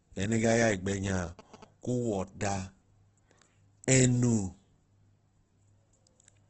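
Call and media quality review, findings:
Opus compression, throughout: speech grainy and rough, nothing above 8.2 kHz. Likely a low-rate Opus music-mode encode, around 12 kbps, filling starved bands with noise.

GSM signalling bursts, 0.68–1.64 s: galloping ticks and 217 Hz buzz, about 20 dB under speech. Nearby 2G phone's radio bursts rectified in the audio circuit.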